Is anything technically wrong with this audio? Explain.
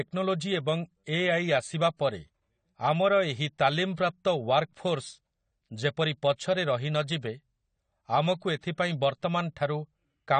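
Yes. Throughout the speech the sound has plainly audible AAC compression damage, with nothing above 9 kHz. The likely cause is a low-bitrate AAC-LC encode, around 32 kbps, whose coarse quantisation leaves the sound dull, smeared and warbling on sibilants, unlike a clean low-pass filter.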